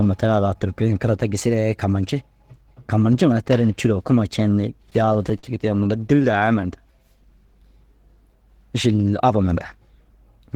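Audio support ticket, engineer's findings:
Repeated stalls (stutter), 4.83–6.49 s. Sixteen short hitches, longest 50 ms, about 204 ms filled in total, nothing lost. Jitter buffer repeatedly ran empty on late packets. Receiver stretched the last sound to bridge each gap.

Jitter buffer slow-down, 6.91–7.60 s. Sound drawn out, playing at 94% speed with pitch unchanged, about 47 ms added. Buffer was building reserve. Single pitch periods repeated back to back.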